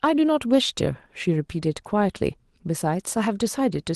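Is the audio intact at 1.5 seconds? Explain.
Yes, the speech at 1.5 seconds is intact, with no dropout, glitch or other fault at that moment.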